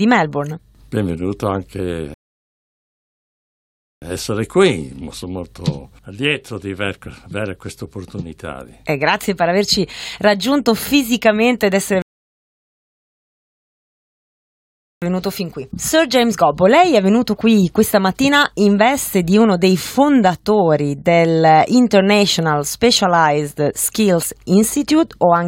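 The player ran out of buffered audio twice, causing rebuffering stalls: silence from 2.14 to 4.02 s and 12.02 to 15.02 s, then resumption exactly where it stopped, adding 1.9 s and 3.0 s.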